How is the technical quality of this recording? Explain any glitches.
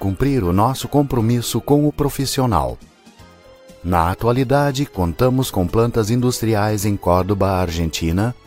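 No glitches or technical faults can be heard here.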